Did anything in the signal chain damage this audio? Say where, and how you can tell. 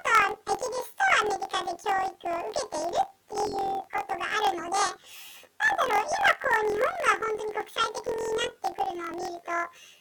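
Yes. Planar audio read as interleaved, throughout the speech, at the sample-format conversion stage. It sounds an octave high with a flutter near 43 Hz: each 23.2 ms block, which fits a 1024-sample block, plays twice at double speed, left half then right.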